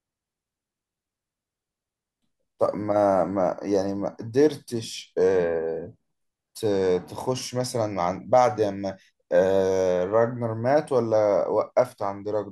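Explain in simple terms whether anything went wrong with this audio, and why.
Nothing went wrong here; the recording sounds as intended.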